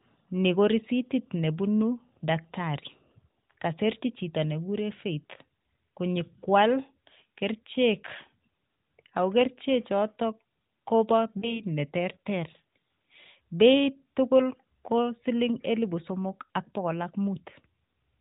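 At 11.40 s the speech briefly dips and warbles, then recovers by 11.61 s. These are lost AMR speech frames. About 20 ms of data failed, pointing to one dropped frame. The narrowband decoder filled the gap by repeating the previous sound with falling gain.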